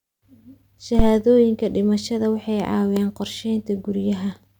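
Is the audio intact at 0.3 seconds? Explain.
Yes, the audio is intact at 0.3 seconds, with no fault present at that moment.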